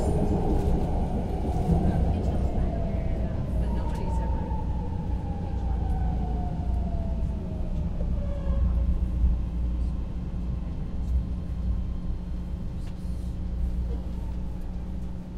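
Mains hum runs through the whole clip, from start to finish. It is a steady low tone at 60 Hz, with some low harmonics above it. The level is fairly high, only somewhat below the sounds themselves. The hum points to the power line getting into the signal path, through a ground loop or a nearby transformer. It never changes with the audio. It sits underneath every sound as a constant drone.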